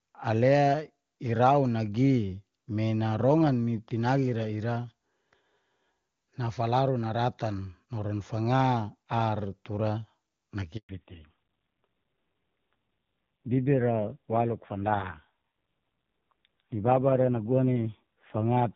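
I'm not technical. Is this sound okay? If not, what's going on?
No. Handover gap, 10.77 to 10.89 s: the phone switched the call from one network to another, and for about 120 ms no speech got through. The speech cuts out abruptly, and whatever was said in that moment is gone for good.

Fallback to narrowband, from 10.89 s to the end: after the switch, the call dropped from HD Voice, which sounds crisp before the gap, to an older phone codec. Everything above 4 kHz disappears, so the speech turns muffled, duller and rougher.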